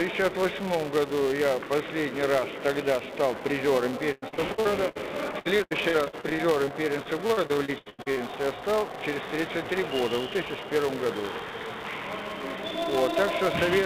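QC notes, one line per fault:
Throughout: filter restarted on every block. Each block starts from silence, leaving a level-following buzz near 345 Hz, which fits a 128-sample buffer.
4.12–8.22 s: repeated packet loss (robotic sound). Nearly thirty holes, the longest 99 ms, are patched by stretching prior sound. The result is choppy audio with pieces missing, with about 29% concealed.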